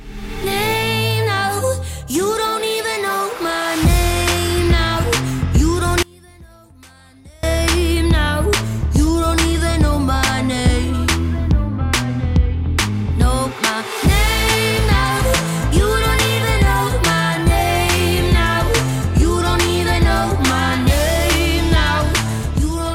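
The audio has one clear fault, from 6.03 to 7.43 s. For about 1.4 s the level falls by about 28 dB. What was in the centre almost vanishes, and only a faint remainder is left. The likely cause is one channel inverted. One stereo channel has its polarity flipped, so the material common to both channels cancels when they are combined. Only the small difference between the channels survives.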